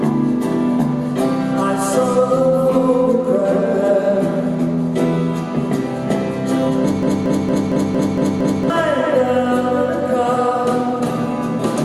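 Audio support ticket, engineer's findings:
Broken-record loop, 7.03 to 8.70 s. A 0.23 s fragment repeats identically seven times, back to back. The audio due in that span is lost. Likely a stalled player or stream resending its last buffer. Unlike a stutter, nothing resumes late.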